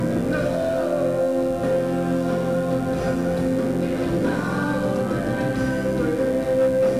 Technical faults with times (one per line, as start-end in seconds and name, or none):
0.00-7.00 mains buzz